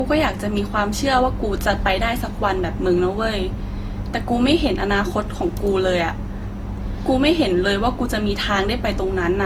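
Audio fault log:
throughout, generation loss: speech sounds swirly, hollow and smeared, with blurred attacks, even though content reaches 20.2 kHz. That is worse than one pass at what sounds like about 48 kbit/s Opus, so it was likely re-encoded roughly four times, each pass adding fresh quantisation damage.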